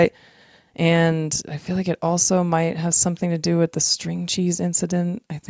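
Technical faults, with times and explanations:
Listening through this speech, nothing stood out as a technical problem.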